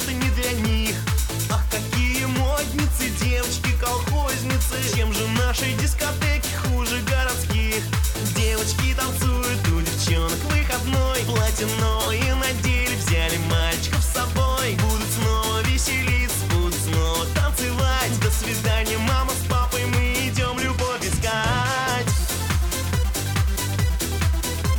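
Corrupt frame decoded at 12.01–12.11 s and 18.47–18.52 s: the decoder played damaged compressed frames, about two and then one, so misread codes scatter energy at wrong frequencies. This yields a glitch with error peaking near -10 dBFS, then a quieter glitch near -20 dBFS.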